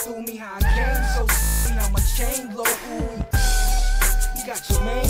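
From 1.43 to 1.66 s a Bluetooth stutter breaks up the sound. Data stopped arriving for about 224 ms, so the receiver kept replaying its last short buffer, giving a buzzing, machine-gun repetition. On a spectrogram this shows as evenly spaced identical vertical slices, and the waveform repeats one block before jumping ahead.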